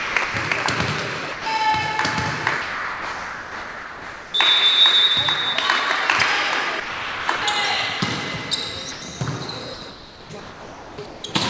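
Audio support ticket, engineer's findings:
Sound chopped by the voice detector at 0.00–0.34 s, 6.80–7.42 s and 9.74–11.34 s. Sending gates on and off repeatedly, with about 260 ms, 540 ms and 1.26 s of material swapped for comfort noise. Choppy sound. Likely sender VAD misclassifying quieter passages.

Sound dropped by the voice detector at 1.32–1.46 s, 2.62–4.34 s, 8.00 s and 8.92–9.02 s. Sound gives way to steady noise for 140 ms, 1.72 s, 20 ms and 100 ms, then resumes on retrigger. Likely the detector treating low-level content as background and halting transmission, receiver filling with comfort noise.

Call path band-limited with nothing above 8 kHz, consistent with G.722 at 64 kbps. Comfort-noise fills sit within that band.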